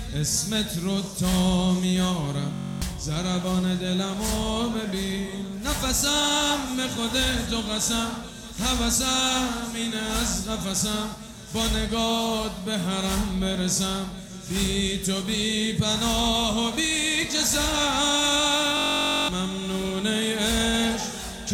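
At 2.54 s and again at 18.77 s the system hung while the sound hardware kept replaying its ring buffer, a system hang loop. Each time, a 21.33 ms slice, which fits a 1024-sample buffer, repeats exactly, producing a steady buzz at 46.9 Hz rather than a stutter. The first lasts until 2.82 s, the second until 19.29 s, and roughly 0.3 s and then half a second of audio go missing.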